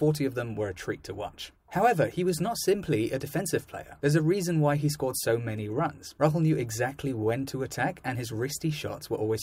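No technical faults can be heard anywhere in this recording.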